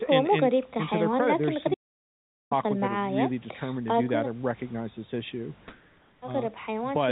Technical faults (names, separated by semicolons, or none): audio dropout to silence; comfort noise in place of the background